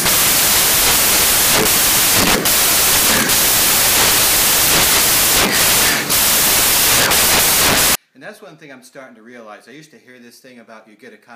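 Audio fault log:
0.0 to 7.95 s, samples built from the wrong bytes: the reader assembles each sample's bytes out of order or misaligned, so the rapidly varying low bits land in the high-order positions. The result is loud, harsh broadband noise.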